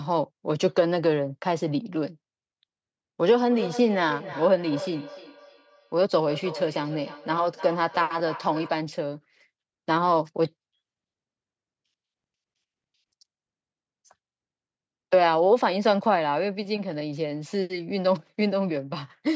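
From 3.49 s to 8.91 s the speech is caught in a feedback echo between two devices. A second device in the same room plays the call back, its sound reaches the microphone again, and the local echo canceller cannot remove audio it did not play itself. Each word returns at an interval of roughly 300 ms as a thinner, ringing copy that peaks at about 14 dB below the speech. Audio above 8 kHz is absent throughout the clip.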